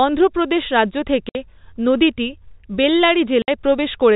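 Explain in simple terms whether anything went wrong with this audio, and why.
The speech suffered packet loss filled with silence. Chunks of the signal never arrived, and the receiver played nothing in their place, leaving two 60 ms holes with hard edges: one at 1.29 s, just after "অন্ধ্রপ্রদেশ রাজ্য", and another at 3.42 s. Each gap matches two lost 30 ms packets. The telephone-style sound itself comes through as expected.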